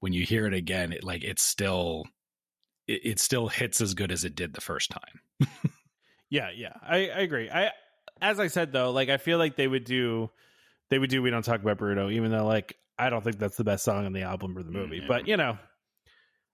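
No technical faults can be heard anywhere in this speech recording. There is nothing in it that calls for a timestamp or a repair.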